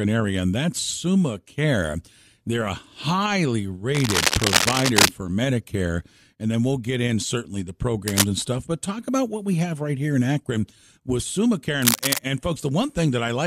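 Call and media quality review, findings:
Cable scratch noise at 3.94–5.09 s after "a highly", 8.08–8.25 s between "get in certainly the" and "and stuff but talk", and 11.82–12.19 s. Dense, uneven scratchy bursts roughly as loud as the speech, likely from a worn cable or connector moved so its contact resistance fluctuated rapidly.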